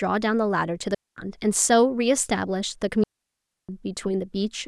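At 0.95 s the speech drops into a clean hole of near silence lasting about 220 ms, returning at 1.17 s, and a longer gap of about 650 ms follows from 3.04 to 3.69 s. Neither has any burst of noise at its edges. This is digital wireless dropout: the radio link lost too much data, so the receiver muted with a very brief fade, holding silence until a usable signal came back.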